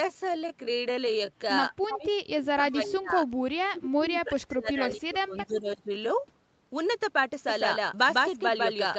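From 1.88 to 3.22 s the speech dips and breaks up for about a second in total, falling by roughly 25 dB at its deepest. This is speech suppressed in double talk, most likely an echo canceller that heard both sides at once and could not tell its own talker from the loudspeaker echo, so it turned everything down.

Inside that stretch, at 1.90 to 1.98 s, a short scrap of echo leak slips through: a copy of the voice arriving 317 ms late and only about 5 dB below the speech. The likely cause is a far end on loudspeaker whose canceller left residue in what it sent back.

From 3.47 to 5.90 s the suppression returns more heavily, with about two seconds affected and drops of roughly 35 dB. Within it, from 5.38 to 5.56 s, a fainter echo leak appears at 319 ms delay, about 15 dB down. Both echo fragments are brief, and they sit on the same delay of about 0.32 s.

From 7.49 s to the end, a doubled audio track takes over. 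A second full-band copy runs a steady 150 ms behind at about the same loudness, likely a second capture path or an edit holding two copies out of step. Unlike the echo, it starts abruptly, never decays or thins, and carries no room colour. All of it sits within the call path's band, with nothing above 8 kHz.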